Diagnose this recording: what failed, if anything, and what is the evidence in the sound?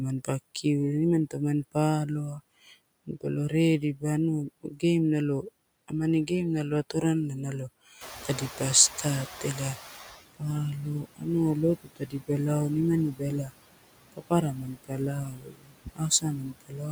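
The failure sits in call processing, in the noise suppressor. Noise suppressor artifacts run through the whole clip. The steady background is pulled down by about 20 dB, frame by frame. It drops away in the gaps and comes back up under the speech. The suppressor is making a fresh gain decision for each band in each frame, and those decisions keep shifting.

Speech is also cut by the noise suppressor. In the first span, from 0.24 to 7.04 s, parts of the speech dip by up to about 21 dB. Around 0.7 s is affected in total. In the second span, from 7.98 s to the end, the dips reach about 22 dB. About 2 s is affected there. Soft consonants and word endings sound swallowed. The suppressor is classing those quiet speech parts as noise.

The noise suppressor is catching up from 8.01 to 10.18 s. Room noise in the recording rises by about 16 dB at roughly 8.0 s. After the rise it sits about 13 dB below the speech. 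At first the new noise comes through with only partial reduction. Over about 2.17 s it sinks as the suppressor's noise estimate adapts, ending at about 15 dB of cut. The lag in that estimate is the mechanism.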